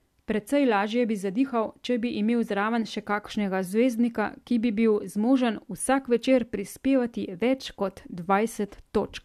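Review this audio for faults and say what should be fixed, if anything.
No faults found; nothing needs fixing.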